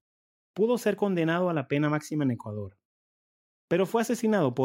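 No technical faults can be heard anywhere in the recording.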